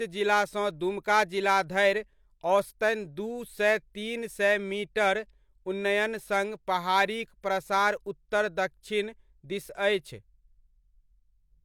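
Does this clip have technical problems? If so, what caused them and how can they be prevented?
No, the speech recording shows no audible technical faults, so there is nothing to trace or prevent.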